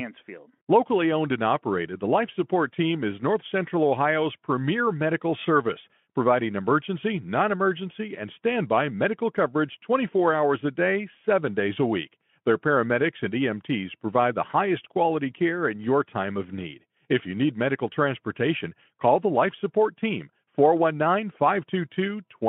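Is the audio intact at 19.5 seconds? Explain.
Yes, the audio is intact at 19.5 seconds, with no fault at that moment.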